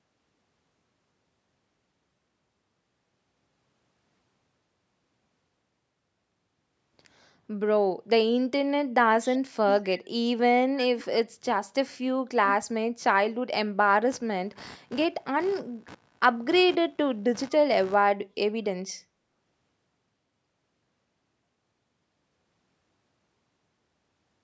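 A speech recording with two technical faults. Around 9.25 to 9.38 s, what sounds like echo leak is heard: a far-end echo canceller likely failed to remove its loudspeaker's output, so a faint copy of the speech returns about 230 ms late and about 25 dB below the direct sound. From 14.12 to 17.95 s, computer activity noise appears: processor or peripheral load shifting the audio circuit's ground puts a buzzy pulsing at roughly 70 Hz into the signal, about 25 dB below it.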